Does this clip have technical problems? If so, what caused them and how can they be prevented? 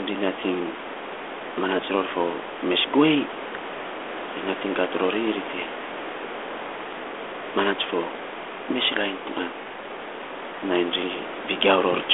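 No, the speech carries through a 32 kbit/s G.726 telephone path limited to roughly 300 Hz to 3.5 kHz with only light coding roughness, and the room's background noise sits about 17 dB below the speech.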